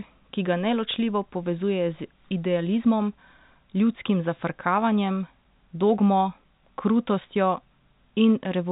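No faults are audible: the speech sits in a telephone band that stops at about 3.8 kHz, consistent with G.711 telephone coding, with nothing breaking up, dropping or shifting anywhere in the clip.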